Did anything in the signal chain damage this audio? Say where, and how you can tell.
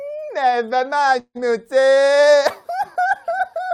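Yes: a call audio freeze at the network stage, from 1.19 to 1.37 s. Packets were most likely held up in transit, so the receiver's jitter buffer ran dry and it extended the last sound as a fading buzz, which drops to near silence for the final 60 ms or so. The speech then resumes exactly where it stopped, with nothing lost, so everything after the gap arrives about 157 ms later than it should.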